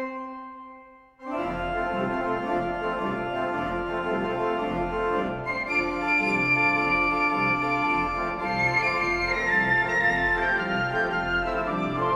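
Nothing is technically wrong with this clip.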